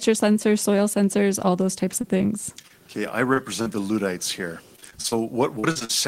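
Short concealed packet loss hits the speech at 2.01, 2.17, 2.62, 2.68, 3.34 and 3.62 s. Each hole, about 20 ms and 40 ms at 3.62 s (which fits 20 ms packets), is bridged by extending the preceding sound, leaving a brief smear or wobble.

Repeated packet loss with a robotic sound follows from 4.76 to 5.13 s (five gaps, longest 35 ms, about a third of the stretch patched) and from 5.59 to 5.91 s (four gaps, longest 44 ms, over 40% patched). The gaps crowd together, so each hole follows soon after the last and the sound turns choppy, with pieces missing.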